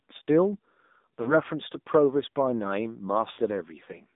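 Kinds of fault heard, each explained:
AMR narrowband mobile codec: The speech went through a 2G or 3G style mobile speech codec. It samples at 8 kHz and rebuilds each 20 ms frame from a vocal tract model fed by a few pulses. Here the line runs only from about 200 Hz to 3.7 kHz. The coding damage is plainly audible, with a buzzy, synthetic edge that fits a low rate near 7.4 kbps.
Lost AMR speech frames: Radio errors corrupted some frames, so the decoder filled the gaps. It repeated the last good pitch and vocal tract settings at falling gain. At 1.22 to 1.35 s about 40 ms of speech is missing, heard as a short dip or warble. At 3.32 to 3.40 s the gap is about 60 ms. The sound smears and sags there, then returns rough for a moment.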